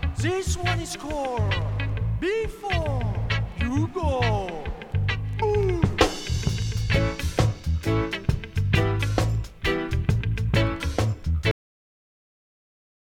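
At 11.51 s the audio has a cut-off end. The final buffers were never written out, so the sound halts mid-event and falls straight to digital silence for the last 1.64 s. Unlike a fade or natural ending, there is no decay tail, only an abrupt stop.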